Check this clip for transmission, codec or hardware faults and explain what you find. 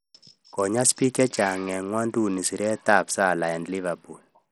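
The whole clip carries one codec fault, likely Bluetooth SBC compression. Throughout, the speech has dull, flickering treble with a gritty noise and aliasing. With so few bits, the upper sub-bands starve and the rest are coarsely quantised, which fits a low bitrate near 64 kbps.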